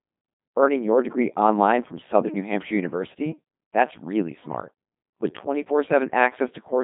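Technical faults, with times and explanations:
Throughout, Codec 2 vocoder: the speech comes out robotic and buzzy, rebuilt from sine waves using only pitch, voicing, energy and a coarse spectral envelope. The heavy damage fits a rate near 2.4 kbit/s, with the band confined to 150 Hz to 3.6 kHz and nothing above 3.7 kHz.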